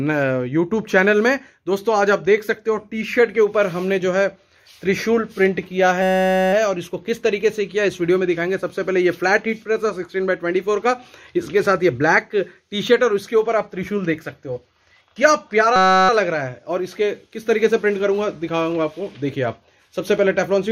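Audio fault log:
6.02–6.53 s and 15.76–16.09 s, system hang loop: the system stalls and the hardware keeps replaying one tiny 5.33 ms slice, which fits a 256-sample buffer, so you hear a steady buzz at about 188 Hz. Next to nothing goes missing afterwards.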